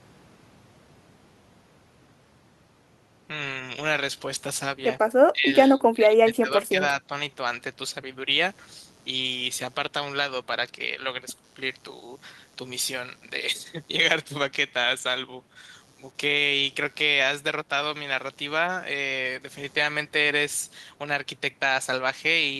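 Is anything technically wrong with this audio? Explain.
Yes, there are two problems. Between 5.33 and 5.51 s, and again from 5.74 to 6.81 s, the speech level drops sharply: by around 15 dB in the first short dip and closer to 20 dB across the longer one, so the talker sounds pushed back and partly gated out. This is likely speech suppressed in double talk: with both ends talking together, the echo canceller could not tell the local talker from loudspeaker echo and attenuated the whole signal.

From 8.36 s to the end, a faint buzz sits underneath the speech, pulsing at roughly 100 Hz and about 30 dB below the speech level. This is computer activity noise: changing load on the processor, graphics card or mouse shifts the ground shared with the audio circuit, and that disturbance enters the signal. The buzz follows the machine's activity rather than the speech, so it persists through pauses.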